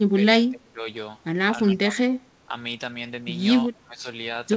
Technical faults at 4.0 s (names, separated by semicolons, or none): speech suppressed in double talk